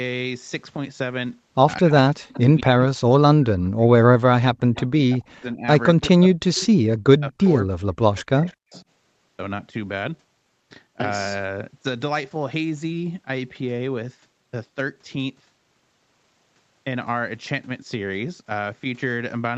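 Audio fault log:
1.78–4.42 s and 5.02–8.72 s, speech suppressed in double talk: speech dips by as much as about 40 dB for roughly two seconds in each span, likely because an echo canceller muted the talker while the far side spoke.
2.33–2.40, 4.74–4.86, 6.01–6.11, 6.58–6.67, 7.42–7.47 and 8.16–8.82 s, echo leak: faint copies of the speech return about 220–235 ms late, at about −30 to −15 dB, likely loudspeaker sound that an echo canceller failed to remove.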